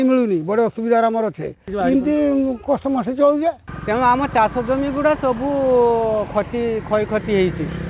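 No technical faults can be heard anywhere in the clip. The sound has nothing above 4 kHz and carries a light coding grain, which fits a narrowband G.711 mu-law call path at 64 kbps working as intended.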